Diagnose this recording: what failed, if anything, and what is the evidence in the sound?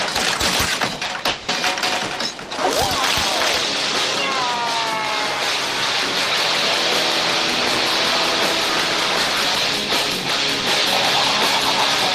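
At 1.05 s a sound hangs slightly too long, until about 1.11 s. This is a short stall from a late packet at the network stage. The jitter buffer ran dry and about 40 ms of extended sound filled the wait. Nothing was lost, but everything after plays 40 ms later.

From 1.28 to 1.50 s the audio stops moving and holds its last sound as a fading continuation that never drops to silence. This is a call audio freeze. Packets were likely held up in the network and emptied the jitter buffer. About 200 ms was filled this way, with nothing missing, so playback resumes where it left off, now about 240 ms behind.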